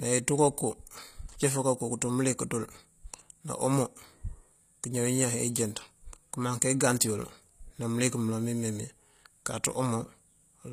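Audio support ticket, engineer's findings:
Gritty, lispy s sounds and a metallic, synthetic treble throughout the speech; nothing above 14.9 kHz. Likely HE-AAC compression at a rate fitting roughly 24 kbps. Treble is rebuilt by band replication rather than simply dulled like plain lowpass loss.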